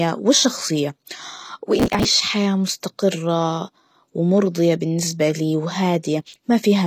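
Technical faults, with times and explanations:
throughout HE-AAC compression: the treble is gritty and lispy on sibilants, with nothing above 14.9 kHz. This is likely HE-AAC at a low bitrate, around 24 kbps, rebuilding the top band by copying lower bands upward so its harmonics don't line up.
1.79–2.05 s and 6.20–6.36 s processor overload crackle: two bursts of gritty tearing. Many short audio buffers, roughly 5 ms each, missed their deadlines in a row and were skipped outright, leaving dozens of hard-edged gaps that merge into crackle until the load eases.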